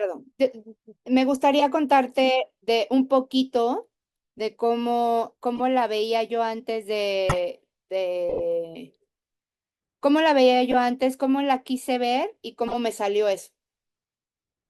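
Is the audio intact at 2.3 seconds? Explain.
Yes, at 2.3 seconds the speech is intact, with no dropout, click, distortion or other fault at that point.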